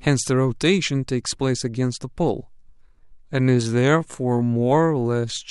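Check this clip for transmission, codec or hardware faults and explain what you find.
One fault is present: a time-stretched section from 2.51 s to the end at 5.51 s. The speech suddenly slows to about 0.67 times its pace, yet pitch stays put. It drags. Software likely lengthened it by repeating short slices.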